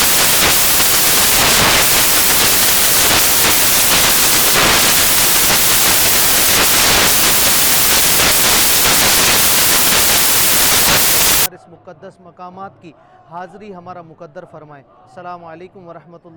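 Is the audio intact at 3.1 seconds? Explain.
No. At 3.1 s the audio sits inside a stretch of samples built from the wrong bytes, running from 0.0 to 11.46 s. Each sample's bytes are misassembled, so the jittery low bits dominate, giving loud, harsh broadband noise: a flat, full-band wash on a spectrogram and a dense waveform.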